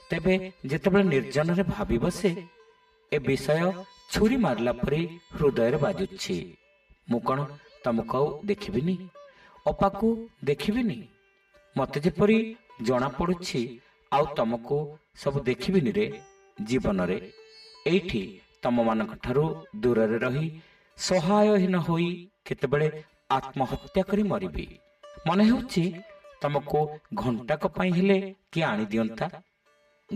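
Channel delay (comb filtering) runs throughout: one channel lags by roughly 5 ms before the mono sum, cutting evenly spaced notches from around 100 Hz upward, leaving everything hollow and phasey.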